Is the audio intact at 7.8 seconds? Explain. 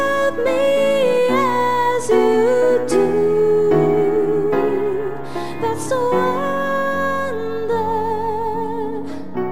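Yes, the audio is intact at 7.8 seconds, with no dropout, glitch or other fault at that moment.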